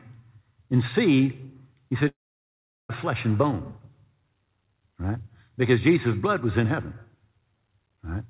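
From 2.08 to 2.91 s the sound breaks off for a little over 0.8 s. The last moment is stretched into a brief buzzy tail that fades away, leaving near-silence until the sound resumes with that portion gone. This is most likely a long network dropout with receiver concealment. On a waveform it appears as a decaying smear flattening to an almost empty band. A spectrogram shows blurred, repeated harmonics fading to a dark gap, all held below 4 kHz, which fits a narrowband call codec.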